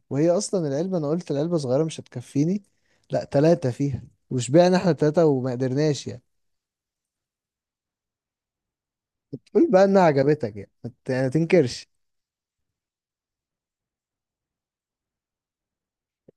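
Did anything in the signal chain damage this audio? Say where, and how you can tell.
No, nothing damaged this audio.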